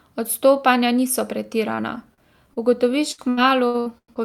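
From 1.75 s to 4.20 s, repeated packet loss gives choppy speech with pieces missing. Ten gaps, the longest 178 ms, are patched by stretching prior sound.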